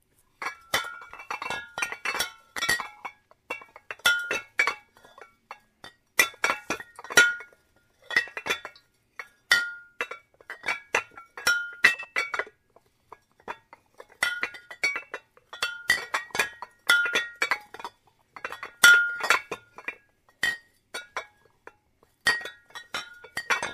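At 2.58 to 2.80 s, and again at 11.94 to 12.05 s, the audio briefly turns into a garbled flutter, its flow jumbled for a fraction of a second. These are frames out of order: two adjacent runs of frames were decoded in swapped sequence, so each stretch plays with its halves exchanged. The swapped blocks are about 104.5 ms and 52.2 ms long, which fits runs of four and two frames, and no time is lost.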